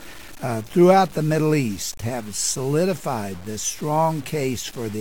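Quantization error runs through the whole sound, rising and falling with it. This is low bit depth without dither, likely truncation to 7 bits, leaving error only about 25 dB down. Unlike steady dither hiss, it follows the signal.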